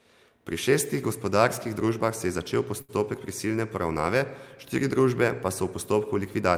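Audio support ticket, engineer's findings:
Short stall from a late packet, 2.81 to 2.91 s, just after "družbah se je začel". Sound held unnaturally long, slight buzz or dip. Component: receiver jitter buffer. Packet arrived late, buffer ran dry, last sound stretched about 73 ms until arrival. Playback resumed from the same point; nothing lost, but delay grew by 73 ms.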